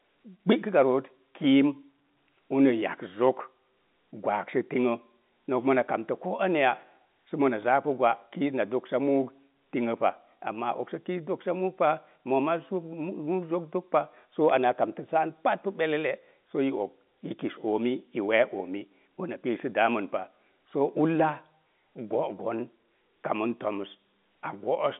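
No technical faults are audible.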